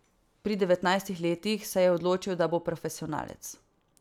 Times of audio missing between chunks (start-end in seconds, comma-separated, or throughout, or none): none